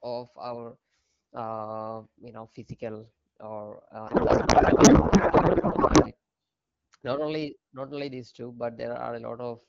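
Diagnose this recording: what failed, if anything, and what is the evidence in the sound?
The failure is at the codec stage, a codec payload misread between 4.07 s and 6.11 s. For those two seconds the speech gives way to garbled noise and warble that barely tracks the talker, then the clip returns abruptly to the clean AMR wideband sound heard on either side, which fits a 12.65 kbit/s stream. The decoder was evidently parsing frames with their fields shifted, consistent with octet-aligned AMR packing being read as bandwidth-efficient, until the framing agreed again.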